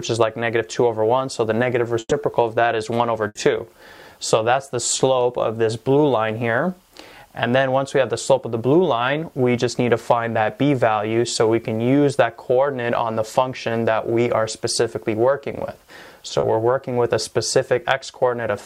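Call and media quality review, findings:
Burst of packet loss at 1.99–2.14 s and 3.27–3.38 s. Receiver jitter buffer and concealment. Roughly 120 ms and 80 ms of audio lost. The last sound is extended and faded out, with about 30 ms of silence before the first gap resumes, then skips ahead.

Short concealed packet loss at 16.39–16.46 s. Decoder packet loss concealment. About 40 ms never arrived in time and was filled by extending the preceding sound, then crossfaded back. It is heard as a brief smear in the audio.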